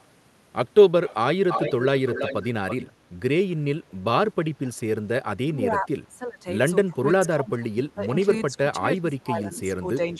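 A speech recording, likely from a loudspeaker-side echo canceller that let some of the far end's playback back into the call, shows echo leak twice. A faint delayed copy about 20 dB under the speech appears at 1.06 to 1.15 s, lagging roughly 0.38 s. A much stronger one, only about 5 dB down and lagging about 0.33 s, runs from 1.5 to 2.92 s. The same canceller, likely unable to separate its own talker from the echo while both sides spoke, produced speech suppressed in double talk at 5.46 to 6.46 s, 6.9 to 8.16 s, and 8.51 s to the end. There the voice sinks by roughly 20 to 25 dB in patches. The call path underneath, whose top end stops near 12 kHz in a way that fits Opus, is not at fault.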